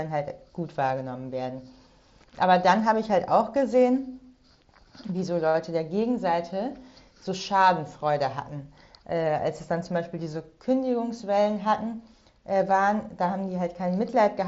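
No technical faults detected.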